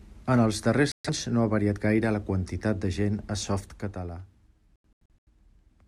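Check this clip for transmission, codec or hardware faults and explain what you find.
Two digital broadcast dropouts are audible in this speech. From 0.92 to 1.10 s, between "els darrers" and "no ha variat gaire", the sound mutes for about 128 ms. From 4.76 to 5.30 s, several short holes totalling about 300 ms, the longest about 85 ms, break the audio. Each occurs when the receiver discards corrupted frames and stays silent until valid ones return. The speech in those gaps is lost.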